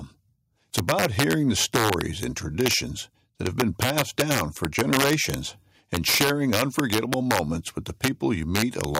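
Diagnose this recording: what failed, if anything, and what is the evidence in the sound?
Integer overflow in the gain or sample-format conversion stage. Throughout the speech, the loudest peaks crack violently, harsher than clipping. The signal's pushed about 2 dB past full scale, so roughly half a percent of samples wrap to the opposite sign instead of being limited.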